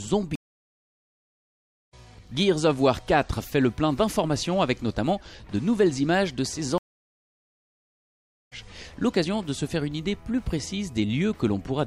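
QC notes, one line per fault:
0.35–1.94 s and 6.78–8.53 s, stream reconnect: the audio drops out for about 1.5 s and then about 1.7 s, and each time it comes back further along, skipping ahead by roughly a second and then roughly one and a half seconds, with the first moment after each gap fading in. The connection broke, the player sat silent while reconnecting, then started a fresh decoder mid-stream at a later point.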